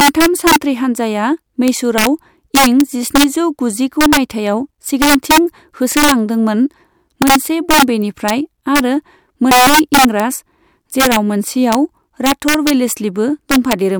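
Violent cracks burst out on the loudest speech peaks throughout: integer overflow, where gain about 5 dB too high wraps a small fraction of samples to the opposite sign.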